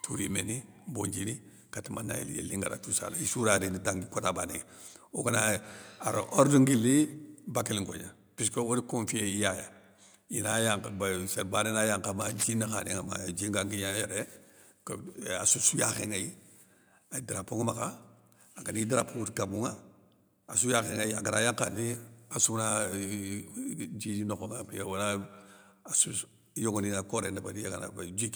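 At 6.78 s the speech and the background under it drop in level together in a single step of about 2 dB. This is a microphone volume stepped down, most likely the call software trimming the device's input gain after judging it too loud. Unlike a speaker simply moving away or talking more softly, the change is instantaneous and lowers the room noise by the same amount, then holds at the new level rather than drifting back.

From 12.21 to 12.44 s a dense, irregular scratching rides over the speech for about a quarter of a second, at a level around 10 dB below the speech. This is cable scratch noise, likely from a worn cable or connector being moved so that its contact resistance jumps about rapidly. It differs from clipping or dropout crackle because the speech underneath stays intact while the uneven bursts of rustle sit on top of it.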